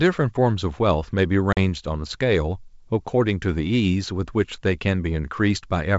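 A speech recording carried over a G.722 wideband telephone link with packet loss on an ADPCM call: from 1.53 to 1.58 s a handful of packets, about 40 ms, went missing and were filled with silence, leaving a hard-edged gap. The decoder's adaptive predictor and step size then no longer match the sender's, so the speech resumes briefly distorted before settling. The wideband coding sounds consistent with full-rate G.722.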